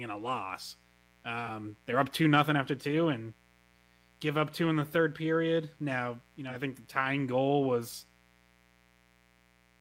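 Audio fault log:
throughout: mains buzz. A raspy 60 Hz buzz with harmonics extending into the kilohertz range sits around 35 dB below the speech. Sharp switching spikes twice per mains cycle leaked into the signal path.
1.46–1.49 s and 6.49–6.55 s: AAC frame loss with concealment. There are brief smeared, phasey patches just before "they're up two nothing" and between "you know" and "think the tying goal". Each fits a single lost frame that the decoder filled by re-using the previous spectrum.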